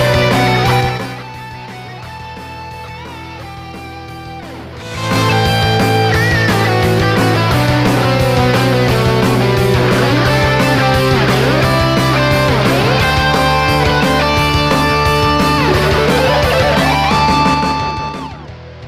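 Zipper noise appears twice. From 0.77 to 1.24 s, the level drops by around 15 dB in audible 3 dB steps, about ten per second. From 17.45 to 18.52 s, it falls by around 20 dB, with steps at roughly five per second. Each step is a jump in gain with no smoothing, so every jump clicks. The clicks form a ticking that rides on the sound.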